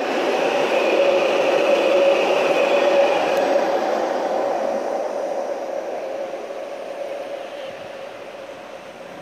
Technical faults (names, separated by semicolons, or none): none